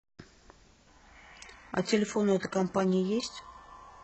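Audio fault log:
1.39 to 4.03 s, adaptive stream at a lower bitrate: the speech abruptly turns synthetic up top, with no gap, as the player switches to a far leaner stream.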